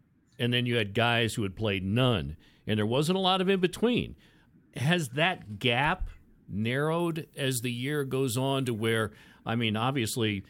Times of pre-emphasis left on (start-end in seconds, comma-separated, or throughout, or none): 7.00-9.06